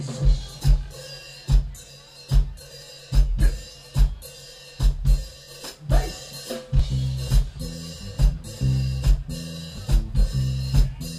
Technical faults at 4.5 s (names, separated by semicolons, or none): none